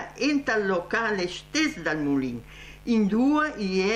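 Mains buzz runs through the whole clip, from start to end. Spiky interference from switching circuitry enters twice per 50 Hz cycle, spraying harmonics up into the kilohertz range, so a steady, raspy buzz sits roughly 25 dB beneath the sound.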